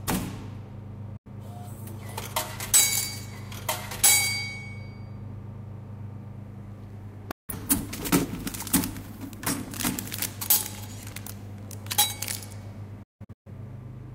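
At 1.17 to 1.30 s, 7.31 to 7.53 s and 13.03 to 13.52 s, a digital broadcast dropout mutes the receiver on lost or corrupted frames, fading out over 8 ms. The sound sent during each gap is lost. The waveform and spectrogram show blank gaps, and the last is broken into several holes, the longest 170.7 ms.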